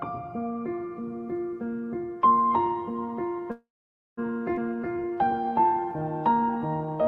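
At 3.51 s the audio stalls. The last sound carries on briefly as a fading buzz, then gives way to about half a second of silence before playback resumes at 4.19 s, right where it left off. This call audio freeze adds roughly 0.66 s of delay and loses nothing. It is most likely caused by packets held up in transit while the jitter buffer ran dry and the receiver stretched the final sound to cover the wait. Moments later, between 4.55 and 4.59 s, the audio lurches forward with almost no gap, and about a third of a second of material is simply gone. That skip ahead happens because a stretch of audio was discarded while newer audio was already queued. The dropped section may have been lost in transit or cleared from an overfull buffer, and the sound on either side of it is spliced almost directly together, claiming back part of the delay the freeze had built up. From 4.70 s to 7.03 s the audio then plays slow, at about 88 percent speed with the pitch unchanged, so sounds are drawn out and may waver slightly. 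This is a jitter buffer slow-down. With its reserve running low or its target delay just raised, the buffer keeps repeating single pitch periods and short bits of pause, adding around 0.3 s in total to build a cushion back up.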